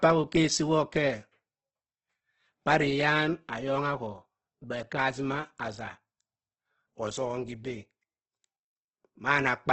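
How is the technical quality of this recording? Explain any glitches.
Heavy compression damage is audible throughout the speech, likely from Opus compression at a very low bitrate, near 12 kbps. Its music mode spends scarce bits on coarse band energies and patches fine detail with folded or noise-like content, so speech sounds rough and grainy. A spectrogram shows a hard ceiling at 8.2 kHz, with smeared, noisy texture below it and few clean holes.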